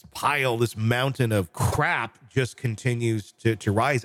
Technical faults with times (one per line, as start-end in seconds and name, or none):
1.71-1.76 repeated frames